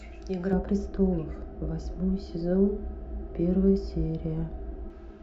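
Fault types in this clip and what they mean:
De-emphasis applied wrongly: a treble-cut stage meant to reverse pre-emphasis acted on speech that never carried that boost, or undid it a second time, so the high end was pulled down with nothing to balance it. From about 0.53 s to 4.90 s the response tilts smoothly downward, sitting about 11 dB lower at 10 kHz than at 1 kHz, which leaves the speech dull and muffled, with sibilants and consonant edges softened.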